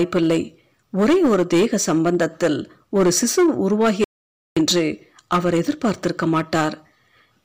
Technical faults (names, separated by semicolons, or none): hard clipping; DAB burbling; audio dropout to silence